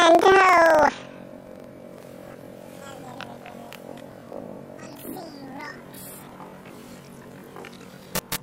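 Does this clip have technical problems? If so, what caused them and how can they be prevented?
Yes. Planar audio read as interleaved runs throughout. Each 42.67 ms block, which fits a 2048-sample buffer, stores all left samples and then all right samples but is read as alternating pairs. Each block therefore plays twice at double speed, an octave high with a 23.4 Hz flutter. To prevent it, match the reader's expected sample layout to the source, or convert planar buffers to interleaved before playback.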